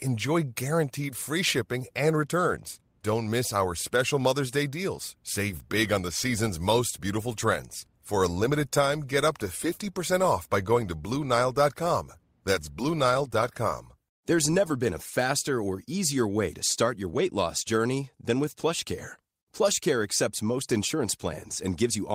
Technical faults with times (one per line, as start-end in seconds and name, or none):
none